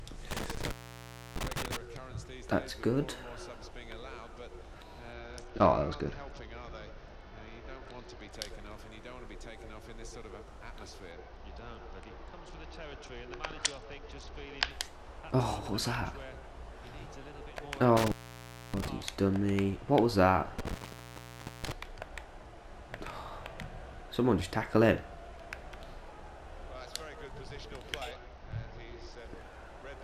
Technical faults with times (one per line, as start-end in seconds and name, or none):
0.31-1.77 intermittent contact
5.13-8.31 Bluetooth SBC bit pool drop
11.11-14.70 Bluetooth SBC bit pool drop
17.97-18.88 intermittent contact
20.59-21.72 intermittent contact
28.11-29.18 Bluetooth SBC bit pool drop